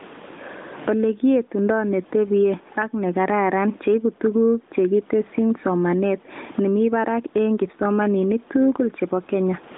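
Gain pumping runs through the whole recording, with the gain swinging by around 20 dB. The likely cause is microphone gain set far too high, with a fast limiter or compressor clamping down on every loud syllable. Loud and quiet passages sit close together, and the faint room noise sits within the telephone-band 200 Hz to 3.7 kHz range.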